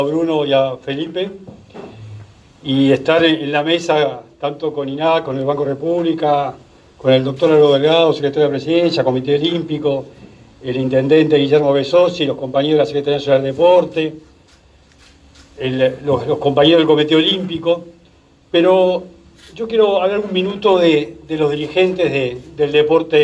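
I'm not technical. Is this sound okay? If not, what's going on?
Yes, the sound is technically fine, with nothing going wrong in the signal at any point.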